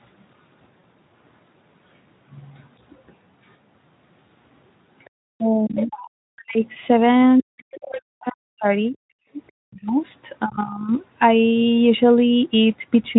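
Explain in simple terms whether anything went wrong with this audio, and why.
Several things went wrong, all typical of a phone or internet call.

At 0.80 to 0.84 s there is VoIP packet loss concealed by the speech codec. Two small chunks of the voice, about 40 ms in all, never arrived. The receiving software filled the hole by guessing from the sound just before it, stretching that into a short, fading smear of sound. Because each guess builds on the previous one, the voice takes a moment to sound clean again.

From 5.05 to 5.85 s, again from 7.57 to 8.01 s, and as a faint trace from 9.47 to 9.52 s, a second, quieter voice can be heard behind the main talker. This is the other side's voice leaking through. The likely cause is that the talker's device played the other person on its loudspeaker, the microphone picked it up, and the echo canceller did not remove all of it.

Between 5.36 and 10.92 s the main talker's voice repeatedly dips, dulls or almost disappears, adding up to about three seconds. 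This is speech suppressed in double talk. Both people were likely speaking at once, and the echo canceller could not tell the talker from the loudspeaker echo, so it turned everything down. The talker loses pieces of what they say while the other side speaks.

At 9.23 to 9.31 s the room sound behind the voice briefly drops out, for about 70 ms, and then comes back. This is background gated by the echo canceller. While the loudspeaker was playing, the canceller clamped the microphone down hard for an instant and then released it. It is heard as a short hole in the background noise.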